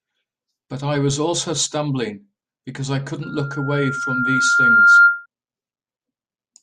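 At 3.22 s a loudspeaker feedback squeal begins: a steady 1.4 kHz tone swells over about a second and a half to roughly 15 dB above the speech, then stops at 5.26 s. The microphone is re-amplifying its own loudspeaker, and at that frequency the loop gain exceeds one.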